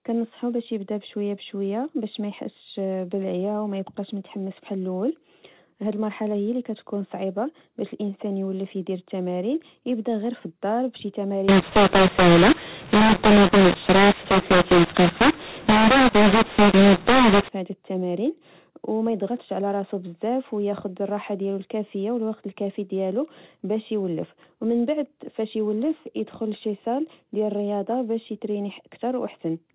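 In this speech clip, from 11.49 s to 17.49 s the sound turns harsh and gritty, levels jump unevenly, and pauses fill with hiss. That is mu-law and A-law mixed up: the mu-law coded telephone audio is decoded as A-law, scrambling sample levels and lifting near-silent samples well above silence.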